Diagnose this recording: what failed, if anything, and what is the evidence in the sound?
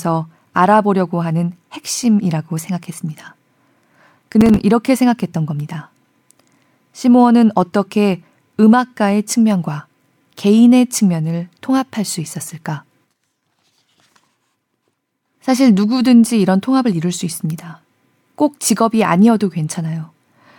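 Processor overload crackle at the driver or buffer stage. From 4.34 to 4.63 s the speech tears into a burst of crackle. Brief silent gaps with hard edges repeat there. They fit about seven missed buffers of around 5 ms. The processor missed its deadlines.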